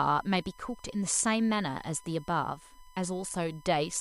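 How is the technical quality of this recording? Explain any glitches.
The recording carries one fault, a steady tone running under the speech from start to finish.

USB whine, present throughout: the USB bus pulls current in 1 ms frames, and that pulsing leaks into the audio through power or ground, leaving a fixed 1 kHz whine sitting roughly 30 dB below the speech.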